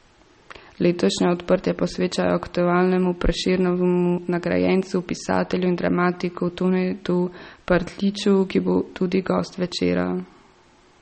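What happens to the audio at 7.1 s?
At 7.1 s the speech carries the same damage heard from start to finish. Nothing is present above 8.4 kHz, so the top end sounds dull and muffled. The damage is plainly audible, with a watery, swirly quality and smeared attacks. The likely cause is MP3 compression at a low bitrate, which fits roughly 32 kbps. Short of bits, the encoder cuts the treble at a fixed point and drops weak frequency lines, which flicker from frame to frame.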